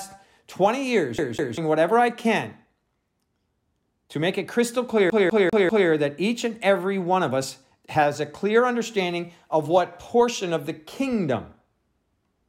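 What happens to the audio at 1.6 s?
Just before 1.6 s, the sound is caught in a CD stuck on one turn. From 1.18 to 1.58 s, the same slice of about 0.2 s plays twice in a row. A scratch is knocking the laser back one track at the same point on each rotation. So the disc keeps returning to that spot. Each jump brings a brief mute. The result is a quick, even stutter, the mark of a skipping CD, which clears by 1.6 s.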